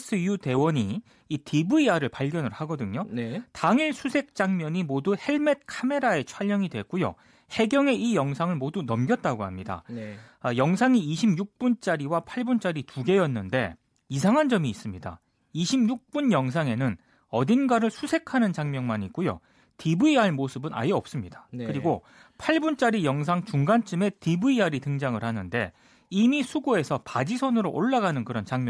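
No technical faults are audible.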